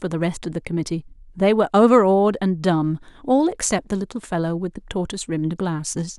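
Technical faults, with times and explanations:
Nothing in this speech recording stands out as a technical problem, so there's nothing to flag here.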